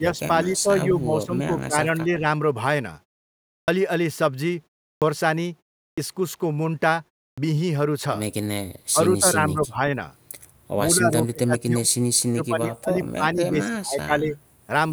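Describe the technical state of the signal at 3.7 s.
Speech at 3.63 s bursts in abruptly out of silence with its opening sound missing, about 49 ms swallowed through 3.68 s. This is a clipped start after a pause: the output device slept during the preceding 0.66 s gap and woke too late.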